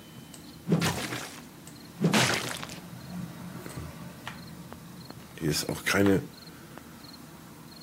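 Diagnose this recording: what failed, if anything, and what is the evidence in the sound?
A train of clicks runs from 4.73 to 6.79 s: about four sharp, similar-shaped pulses at an uneven pace of roughly 1.5 per second, standing around 10 dB above the surrounding sound so they tick clearly over it. The stage is likely the analogue wiring or input interface, where interference from nearby equipment or an unstable connection injects a brief pulse into the signal each time it flares, rather than any digital stage reshaping the audio itself.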